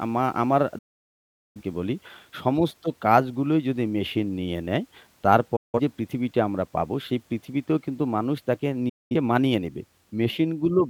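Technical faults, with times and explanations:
0.78 to 1.62 s, 5.56 to 5.80 s, 8.89 to 9.15 s: digital broadcast dropout. The receiver muted on failed frames, so the sound fades out within 8 ms and stays silent. Speech returns later, and what was sent during each gap is lost.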